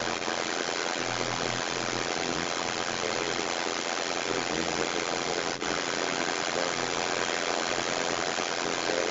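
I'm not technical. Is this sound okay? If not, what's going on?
No, there are two problems. The first is overlap-add ripple through the whole clip: the level pulses up and down about a hundred times a second, so everything sounds buzzy and robotic. The second is the other side's voice leaking through, from 0 to 9.1 s, a second voice about as loud as the main talker or a little louder. The likely cause is the echo canceller missing what the loudspeaker played back into the microphone.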